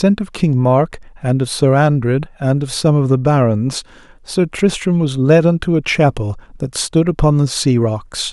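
No technical faults are audible anywhere in this speech.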